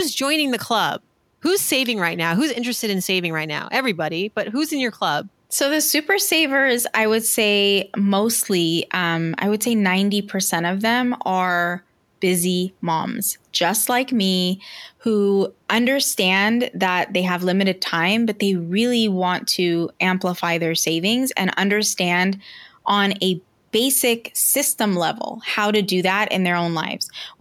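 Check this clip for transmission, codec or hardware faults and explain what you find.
No transmission, codec or hardware faults turn up anywhere in this speech recording. The only background is the ordinary noise of the room around the microphone, sitting about 43 dB below the speech, which belongs to the recording itself rather than to the system.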